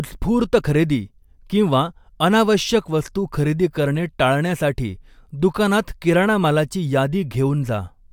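Nothing technically wrong turns up in this speech recording; there are no audible faults to point to anywhere along it.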